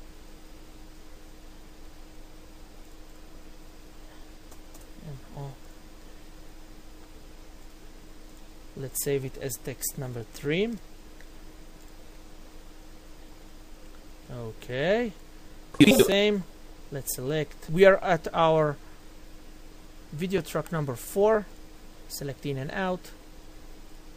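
From 0.53 s to 23.22 s, a click recurs every 1.42 s, about fifteen times in all. These are clock drift buffer slips. Two devices likely run on clocks differing by roughly 700 ppm. The buffer drifts, then drops or repeats around fifty samples.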